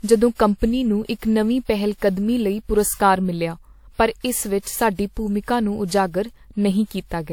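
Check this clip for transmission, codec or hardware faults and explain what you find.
There is one codec fault, generation loss, present throughout the speech. The cause is likely repeated lossy re-encoding, about four passes through a WMA-type codec at a rate that fits 96 kbit/s. Each pass requantised on a shifted frame grid, stacking noise. The result sounds swirly and hollow, with smeared attacks and nothing above 19.9 kHz.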